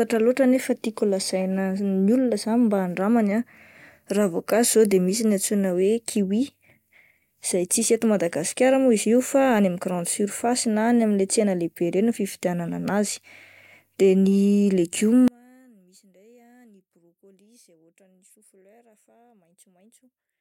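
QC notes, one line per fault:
15.28–20.40 s, one channel inverted: from 15.28 s to the end the speech drops by about 34 dB when heard in mono, leaving only a faint residue where the centred voice should be. The likely cause is reversed polarity on one stereo channel. Because the voice is nearly identical in both channels, summing them cancels that shared material, and all that survives is the small difference between left and right.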